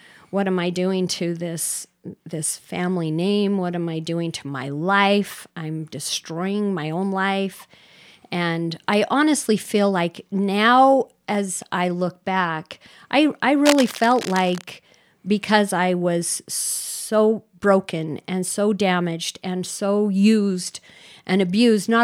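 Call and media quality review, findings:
Cable scratch noise, 13.64 to 14.64 s, just after "look back I I". Dense, uneven scratching and rustling over the speech for about one second, roughly 10 dB below it. Likely a worn cable, connector or control being moved. Contact resistance shifts rapidly as it moves, so the signal picks up irregular noise bursts for as long as the movement lasts. Check and reseat or replace the lead and connectors.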